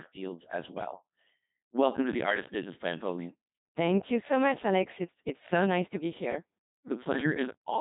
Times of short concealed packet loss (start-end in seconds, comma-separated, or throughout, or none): none